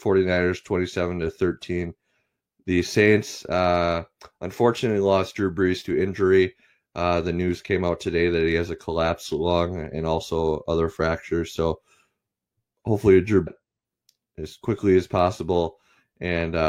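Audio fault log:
13.42–13.48 s, stream segment skipped: the speech lurches forward abruptly, with a short blip of about 50 ms marking the join, and the flow resumes at a later point as though a piece of the talk had been cut out. This is likely one segment of the segmented stream failing to load, with the player moving straight on to the next one. The material in the lost segment never plays, so the two sides of the gap butt together without transition.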